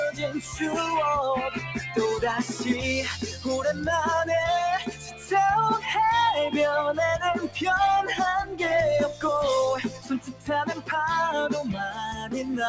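A speech-style noise suppressor has been left running on non-speech audio, so level swings by around 10 dB as it treats held and fading material as noise. The top end stops at 8 kHz, as you'd expect from a G.722 call path. Sounds cut by the noise suppressor sink at 0.11–0.6 s (about 11 dB), 1.5–1.97 s (about 7 dB), 3.16–3.46 s (about 8 dB), 4.79–5.31 s (about 11 dB), 9.84–10.49 s (about 15 dB), 10.68–10.9 s (about 14 dB) and 11.7–12.34 s (about 11 dB), with tails dipping and being cut short while sharper onsets get through.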